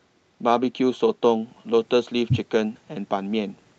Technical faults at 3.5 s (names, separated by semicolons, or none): none